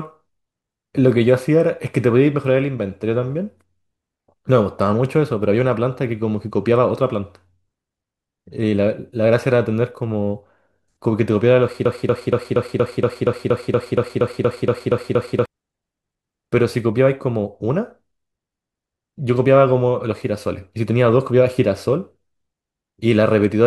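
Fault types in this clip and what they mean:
Broken-record loop: from 11.85 s to 15.46 s the speech locks onto a single fragment about 0.24 s long and plays it 15 times back to back. When normal speech resumes, whatever should have been heard in that span is missing. The likely cause is a stalled player or stream resending the last piece it held. Unlike an echo or a brief stutter, the repeats neither fade nor vary, returning identically every 235 ms.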